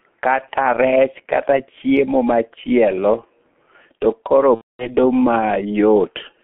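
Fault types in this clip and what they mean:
G.723.1 codec: A low-rate telephony codec that codes in 30 ms frames. Here it leaves the speech heavily muffled and hoarse, with smeared consonants, which fits a bitrate near 6 kbit/s. A spectrogram shows energy only between 200 Hz and 3.4 kHz, with coarse, blocky harmonics.
VoIP packet loss concealed by the speech codec: From 4.55 to 4.96 s, about 240 ms of audio is missing, which fits eight lost frames. The decoder extends its last pitch and filter into a buzzy tone or coloured noise that fades, and the speech stays weak briefly afterward. The waveform decays smoothly.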